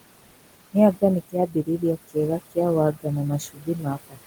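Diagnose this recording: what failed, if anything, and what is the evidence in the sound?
Call-processing stage: noise suppressor artifacts run through the whole recording. The suppressor pulls the room noise, which sits about 11 dB below the speech, down by about 20 dB in every band it judges to be steady noise, frame by frame. The floor therefore sinks in pauses and rises back under speech. On a spectrogram the gaps show a near-empty floor sprinkled with flickering isolated bins. The waveform shows the noise floor pumping with the speech envelope.

Also in call processing, the noise suppressor cuts speech three times, mistaking parts of it for noise. From 1.29 to 2.16 s, about a third of a second in total is pulled down by as much as about 18 dB. At 2.93 to 3.06 s, roughly a tenth of a second drops by about 18 dB. From 3.4 s to the end, the attenuation reaches about 20 dB, so the sound there is swallowed and faint. 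On a spectrogram, harmonic and consonant energy fades into the suppressed floor in those spans. The waveform envelope dips abruptly.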